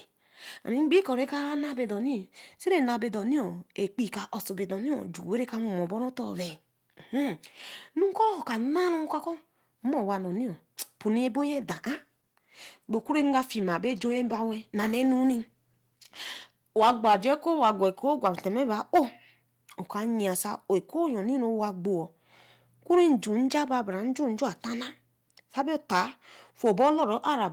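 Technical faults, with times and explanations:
11.52–17.65 s, call bitrate drop: the encoder's rate falls from 32 kbps to 17 kbps, staying at its lowest for about 5.0 s. Coarser coding makes the speech rough and watery, but continuous, with no gaps or repeated fragments as in packet loss.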